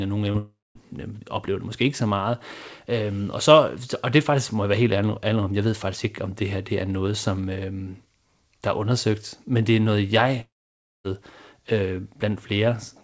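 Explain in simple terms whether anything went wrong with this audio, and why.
Yes, two kinds of problem can be heard in this speech.

From 0.32 to 0.36 s there is a short concealed packet loss: a tiny piece went missing and was patched over, leaving only a quick smear.

From 0.38 to 0.77 s and again from 10.41 to 11.06 s, the sound stretches into a fading buzz or hiss and then goes silent, a likely long network dropout. Unlike the short patch, these gaps run long enough to fall quiet, for about 0.2 s and 0.6 s, and the lost speech never comes back.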